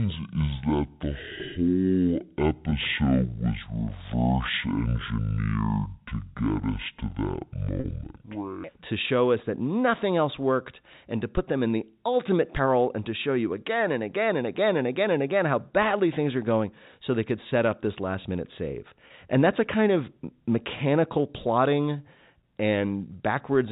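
From 0 to 8.64 s, a section plays at the wrong speed, about 0.55 times normal. The speech sounds slow and deep, roughly ten semitones low, likely from playback against the wrong clock. Packet loss with pitch repetition occurs at 2.70–2.72 s and 7.80–7.84 s, bridging gaps of 20 ms and 40 ms, and again at 19.08–19.10 s, another 20 ms gap. The receiver repeats the last pitch period, giving a brief, buzzy held tone. Each 20 ms gap fits a single lost packet, and the 40 ms gap fits two. The G.711 telephone band stays capped at 4 kHz throughout.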